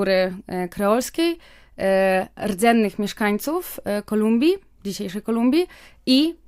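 No technical faults can be heard in this speech recording. There is nothing in the audio that needs a time or an explanation.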